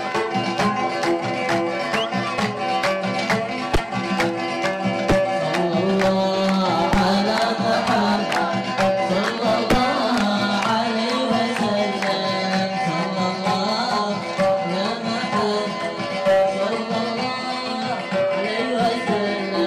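No technical faults can be heard anywhere in the audio, and the signal holds steady throughout.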